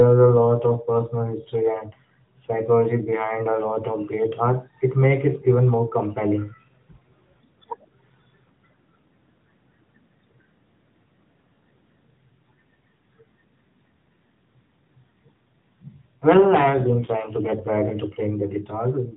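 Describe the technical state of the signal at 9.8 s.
At 9.8 s the speech is intact, carried through the AMR narrowband mobile codec with its band limit at 4 kHz, and there is no fault at that moment.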